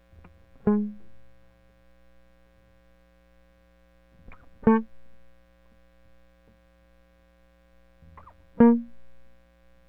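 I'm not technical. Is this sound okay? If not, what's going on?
Yes, this music sounds fine, with nothing going wrong anywhere in it that you'd need to worry about.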